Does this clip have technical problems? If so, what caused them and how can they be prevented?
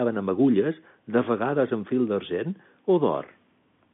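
No, this clip has no technical problems.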